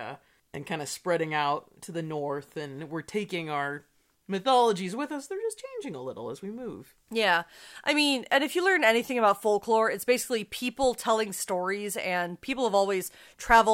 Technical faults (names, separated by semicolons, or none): clock slip clicks